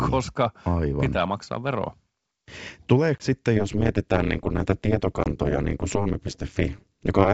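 At 3.18 s the audio drops into a hard-edged 20 ms gap, ending at 3.24 s, then recurs at 5.24 to 5.28 s: packet loss on an ADPCM call, apparently one packet each time. The decoder's predictor and step size lose track of the sender's, so the speech resumes slightly distorted before settling.

From 3.57 s to the end, overlap-add ripple sets in. The frames are rejoined with an overlap that does not sum to constant gain, so the level swings by about 60 dB at around 200 Hz, heard as a metallic buzz with extra tones around each note across the G.722 wideband signal.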